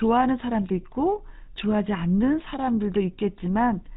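From start to finish the speech carries GSM full-rate codec damage, plainly audible: a buzzy, gravelly roughness from an excitation built on sparse, regularly spaced pulses. Nothing survives above 4 kHz, and the rate fits 13 kbps. That grating buzz sets it apart from narrowband's clean dullness.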